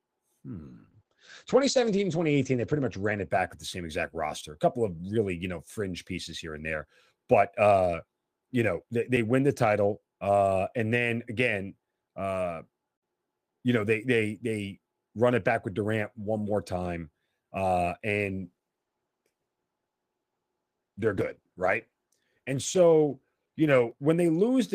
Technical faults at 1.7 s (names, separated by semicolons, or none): call bitrate drop